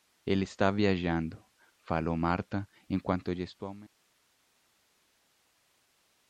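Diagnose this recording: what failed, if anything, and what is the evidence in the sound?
Right after "en cuanto", at 3.87 s, there's an 80 ms gap and then the sound turns boxy through to the end. Nothing gets through above 3.8 kHz, the level shifts by roughly 5 dB, and a new noise floor appears about 35 dB below the speech. That points to the input switched to a poorer device, likely at the driver or device-routing stage, with a narrowband mic or headset call profile taking over partway through the editor's fade-out.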